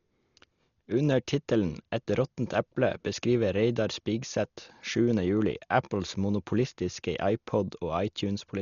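Throughout the speech, nothing is heard above 6.9 kHz, and heavy codec damage adds a rough, fluttering hiss around tonal sounds, likely Dolby Digital compression at a rate fitting about 40 kbps. Unlike MP3 warbling, starved frequency lines return as dither noise rather than gaps.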